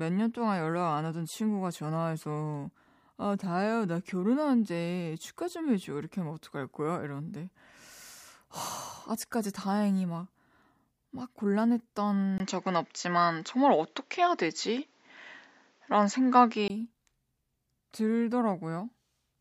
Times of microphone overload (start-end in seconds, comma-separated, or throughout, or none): none